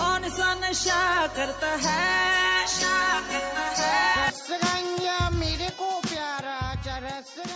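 Nothing technically wrong can be heard in this audio. It has passed through call microphone processing, which leaves nothing above 8 kHz and trims away the lowest bass with its high-pass filter.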